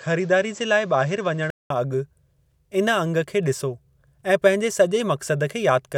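For the first 1.70 s the speech is dull, with nothing above 8 kHz and faint added noise well below it. Then a 200 ms gap and it opens up at the same level, so the input likely switched from a poorer device.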